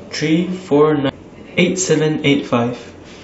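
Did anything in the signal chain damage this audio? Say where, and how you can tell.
Yes. At the codec decoding stage, compressed frames were skipped: about ten frames of roughly 93 ms each never reached the output, so at 1.09 s the speech jumps ahead by around 0.7 s.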